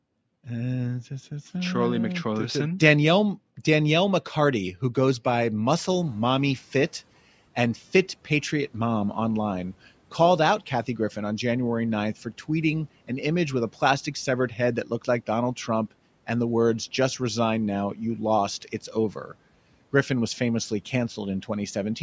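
Speech, band-limited by call microphone processing so that nothing shows above 8 kHz on a spectrogram, with two faults. The first is the noise suppressor catching up. Right after "who goes by", the room noise jumps by about 23 dB around 5.5 s. From 5.65 to 6.61 s it comes through with little reduction while the suppressor's noise estimate adapts over 960 ms, then sinks by about 10 dB. A spectrogram shows a haze that fades over that second. The second fault is speech cut by the noise suppressor. Just after "a plastic severed head", between 14.84 and 15.08 s, the suppressor treats part of the speech as noise and turns it down by up to about 8 dB across roughly a tenth of a second. That stretch sounds swallowed, and the waveform shows a brief dip in the envelope.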